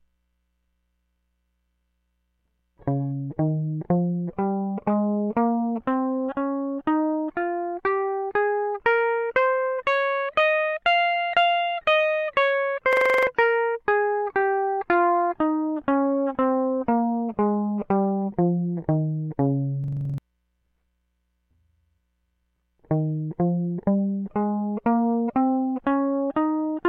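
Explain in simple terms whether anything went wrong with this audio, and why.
Something did go wrong, twice, in this music. At 12.93 s and again at 19.84 s, the sound gets stuck for about a third of a second. Each time, one tiny slice of music, about 43 ms long, repeats eight times in a row. That makes a rapid buzzing stutter, about 23 times a second. This is a system hang loop. The computer briefly froze, but the sound hardware kept replaying the same small chunk of stored audio, which fits a 2048-sample buffer.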